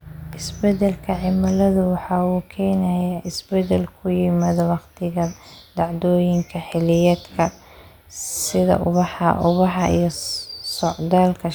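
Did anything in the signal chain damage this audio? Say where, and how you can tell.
No, nothing in the chain audibly damaged this speech recording, and the signal holds steady, continuous and undistorted throughout.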